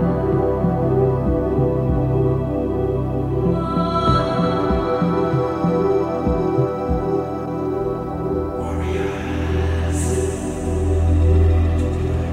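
Nothing stood out on listening to the recording.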